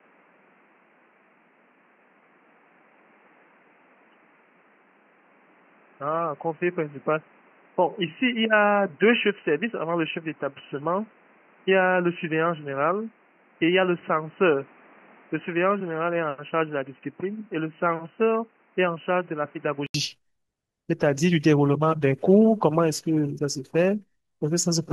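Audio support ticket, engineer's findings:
Dull, boxy speech from 0.0 s to 19.94 s; nothing above 3 kHz, level about 5 dB lower, noise floor about 35 dB under the signal. 80 ms gap at 19.94 s, then full bandwidth returns. Probable component: input device selection. Mechanism: likely input switched to a poorer device, such as a headset call profile, for the first 19.94 s.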